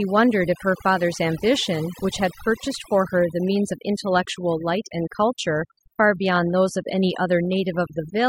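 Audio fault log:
Throughout: overdone noise removal. The denoiser's cranked too hard, killing bands near the noise floor, so the background twinkles with specks.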